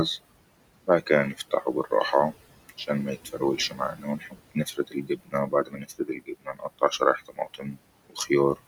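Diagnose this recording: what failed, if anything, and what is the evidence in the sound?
The call-processing stage failed: its noise suppressor is over-aggressive. It treats the room noise, which sits about 17 dB below the speech, as steady noise and pulls those bands down by about 20 dB frame by frame throughout the clip. The result is noise suppressor artifacts: the background drops out in the gaps between phrases and swells back under the speech.

The same suppressor also misjudges parts of the speech as noise, causing speech cut by the noise suppressor. Between 0.86 and 1.92 s, roughly a fifth of a second of speech is turned down by as much as about 18 dB. From 3.25 to 8.58 s it happens far more, about two seconds in all, with drops of up to about 22 dB. Soft consonants and word endings sound swallowed or fade out.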